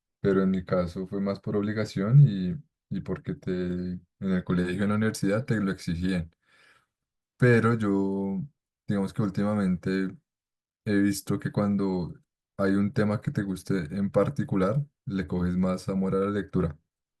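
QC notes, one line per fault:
Nothing to flag here; the speech comes through without a single technical fault worth noting.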